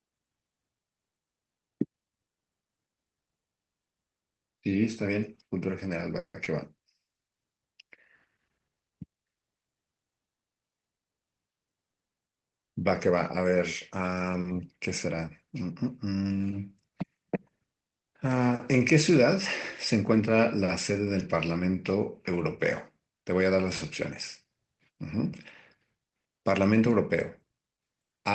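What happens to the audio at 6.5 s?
Around 6.44 to 6.47 s there is a short stall from a late packet: a packet arrived late, so about 20 ms of sound is stretched and held, giving a brief smear with a slight buzz or dip, with nothing lost.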